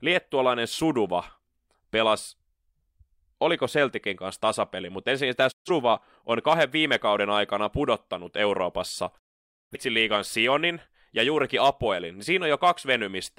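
At 5.51 to 5.70 s and again at 9.18 to 9.77 s, the speech fades out over about 20 ms into silent digital broadcast dropouts. The speech then resumes further on with the missing content lost, not delayed as a buffering stall would leave it.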